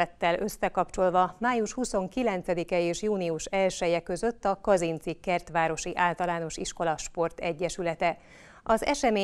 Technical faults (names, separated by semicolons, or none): none